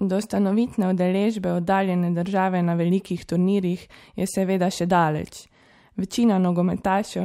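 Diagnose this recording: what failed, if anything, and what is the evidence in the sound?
Nothing failed; the speech carries no audible fault anywhere.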